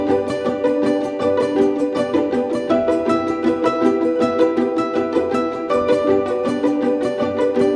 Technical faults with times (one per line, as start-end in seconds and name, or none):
none